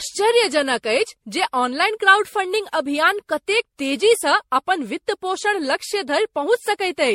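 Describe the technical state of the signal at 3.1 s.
Generation loss is present at 3.1 s, as throughout the clip: the speech sounds swirly, hollow and smeared, with blurred attacks and nothing above 16.5 kHz, likely from around ten successive MP3 encodes at 64 kbit/s, each re-quantising on a shifted frame grid.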